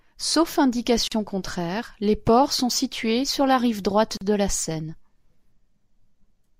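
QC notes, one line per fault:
1.08–1.12 s and 4.17–4.21 s: gap at a join of encoded pieces. About 40 ms of silence breaks the speech before "contraire les ports sont" and between "sur la rive droite" and "de la". Separately encoded segments kept their start delay and end padding, so speech resumes where it stopped.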